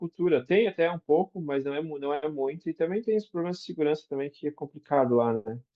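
No technical faults occur at any point in the recording, so there is nothing to place in time order.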